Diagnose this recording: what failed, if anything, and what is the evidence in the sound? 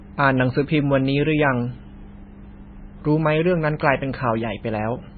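Throughout, the speech sounds watery and swirly, with nothing above 4.5 kHz; this is likely heavy MP3 compression at the codec stage, fitting a very low bitrate near 17 kbps.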